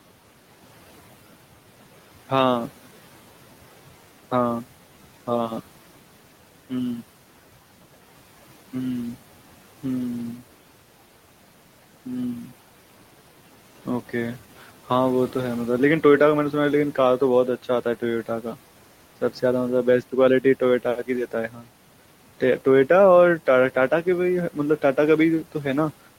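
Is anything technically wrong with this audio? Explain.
Yes. Speech cut by the noise suppressor occurs from 21.49 to 21.66 s: the suppressor mistook part of the speech for noise and pulled it down with the background, by about 11 dB at its deepest, so roughly 150 ms of speech sounds swallowed and faint. The room noise, about 22 dB below the speech, belongs to the recording.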